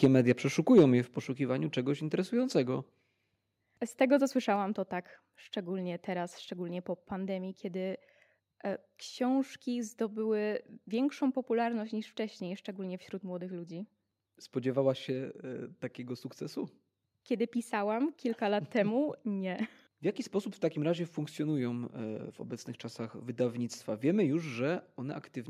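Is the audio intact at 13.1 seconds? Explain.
Yes, the speech at 13.1 seconds plays through intact, with no dropout, click, distortion or other fault at that point.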